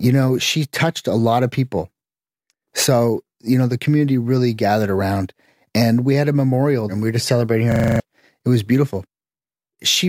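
Speech clip with a system hang loop from 7.72 to 8.0 s: a 40 ms buffer repeats seven times, giving a 25 Hz buzz, with roughly 0.3 s of audio lost.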